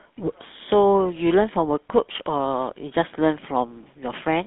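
From start to end the speech carries GSM full-rate codec damage. Excitation is rebuilt from regularly spaced pulses over a vocal-tract model, leaving a plainly buzzy, gravelly roughness, which fits the 13 kbps GSM full-rate codec. The band runs about 150 Hz to 3.6 kHz.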